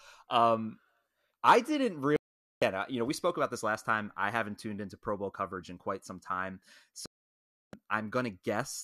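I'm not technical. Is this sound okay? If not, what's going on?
No. The speech drops out twice. This is a digital broadcast dropout. The receiver stopped getting good data, so it went silent until clean data returned. The first gap runs from 2.16 to 2.62 seconds, right after "I didn't" and before "uh you know we". The second runs from 7.06 to 7.74 seconds, just after "in quite some time". Whatever was said during those gaps is gone.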